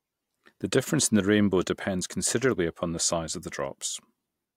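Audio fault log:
Nothing to log here: the speech comes through without any fault worth a line.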